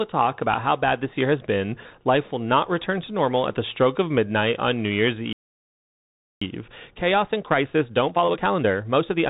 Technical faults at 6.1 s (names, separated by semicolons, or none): Bluetooth CVSD headset codec; playback stall